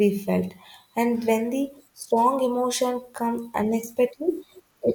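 No technical faults are audible anywhere in this recording.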